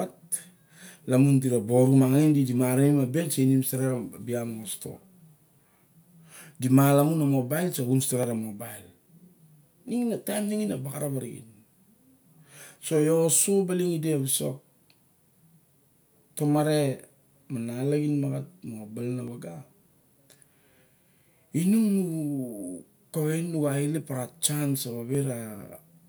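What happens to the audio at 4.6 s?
Nothing goes wrong at 4.6 s: the speech runs on intact through that moment, with no dropout, click or distortion to be heard.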